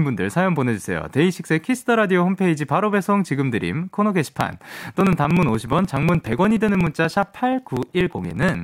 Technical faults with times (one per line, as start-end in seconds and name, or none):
4.29-8.55 periodic USB or driver dropouts